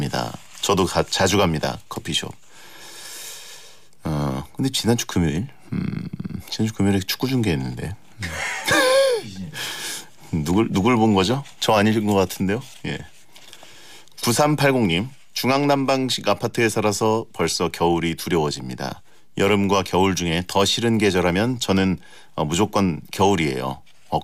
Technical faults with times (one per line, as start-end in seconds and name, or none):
none